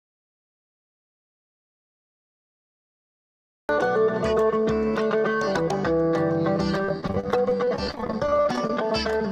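The audio opens in an audio dropout to silence that is already under way at the start and lasts until 3.69 s. The gap is silent, with no room tone at all. The sound then begins abruptly. The likely cause is a lost input, such as a disconnected device or a stray mute, while recording carried on. From 6.78 to 8.70 s there is repeated packet loss with a choppy, robotic sound. The texture breaks into about thirty short holes, none longer than about 30 ms. Each is patched by stretching the preceding sound. Roughly a fifth of that stretch is concealment, not real audio.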